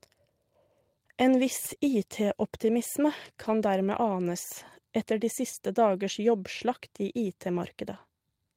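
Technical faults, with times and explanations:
1.67–1.73 s, 3.43–3.53 s, 7.55–7.57 s: lost packets rebuilt from error correction. There's no gap, just brief rougher, noisier patches of 40, 60 and 20 ms, where low-bitrate backup copies of the lost audio filled in.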